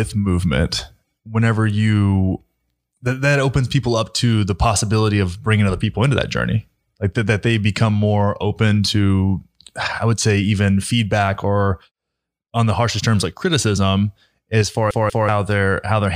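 At 14.91 s, just after "like criticism as far", the CD is stuck on one turn: a scratch keeps knocking the laser back one track, so the player rereads the same 0.19 s of the disc. That short slice of speech plays again twice, each pass separated by a brief mute at the jump, until the laser clears the spot at 15.29 s. The result is a quick, evenly spaced stutter, the mechanical hiccup of a skipping disc.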